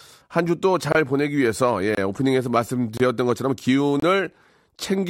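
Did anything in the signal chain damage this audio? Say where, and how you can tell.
Yes. The damage comes from a gap between chunks at the playback or storage stage. The speech stops dead for about 25 ms at 0.92, 1.95, 2.97 and 4.00 s, once every 1.0 s. Each hole has hard edges, and the speech resumes exactly where it paused, so nothing is missing. Only silence has been inserted at the chunk joins. Network packet loss would drop audio and fall at irregular times, while these holes are evenly spaced.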